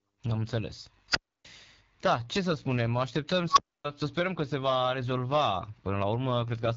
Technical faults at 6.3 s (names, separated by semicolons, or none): AMR wideband (HD Voice) codec